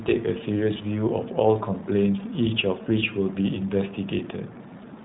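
Throughout, the speech has passed through the iLBC codec, a narrowband VoIP coder that rebuilds each short frame's excitation on its own, without drawing on the frame before. The framing fits 20 ms blocks at around 15.2 kbps. The result is plainly audible: nothing survives above 3.9 kHz, so the speech sounds boxed-in and telephone-like, and the frame-by-frame coding leaves a rough, slightly synthetic grain across every sentence.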